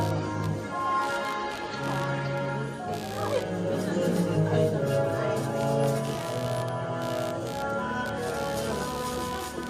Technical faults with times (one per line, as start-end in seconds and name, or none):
0.00-9.69 computer activity noise
4.35 skip ahead